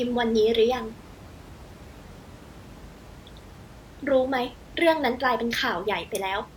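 Nothing's technically wrong with this speech recording; the only thing under it is the room's own background noise, sitting about 21 dB below the voice.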